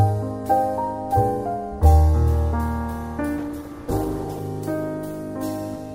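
Call bitrate drop, 3.41 to 4.51 s: the encoder's bit budget collapses, sounding coarse and muffled, which fits a fall from 128 to 14 kbps.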